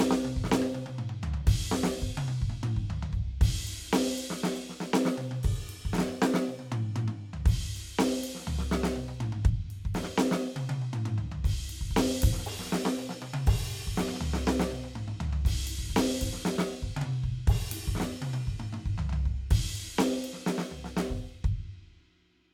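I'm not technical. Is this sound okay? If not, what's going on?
Yes, this music sounds fine, and there's nothing here that needs fixing.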